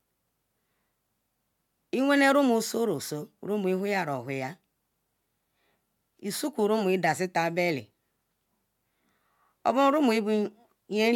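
A speech recording with nothing technically wrong with it.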